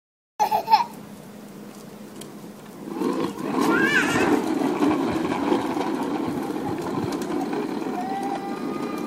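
The clip opens with a cut-off start. The first 0.40 s is digital silence, and at 0.40 s the audio appears abruptly, already in the middle of a sound rather than rising from its natural beginning. This indicates the capture or stream began late, so whatever preceded that point was never recorded. There is no attack or fade-in; the signal steps straight from silence into the sound, which makes the entry sound chopped.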